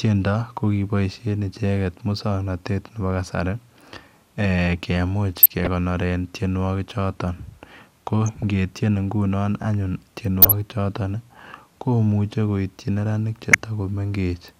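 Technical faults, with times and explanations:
5.39–5.67 s, 8.26–8.43 s, 10.42–10.53 s and 13.52–13.64 s: DAB burbling. Each burst is a short patch of noisy blips over the speech. Weak reception left a few tenths of a percent of bits wrong, more than the error correction could repair. Corrupted samples in the MP2 data then put short blips of noise in single sub-bands, and these flickering bands form the burbling.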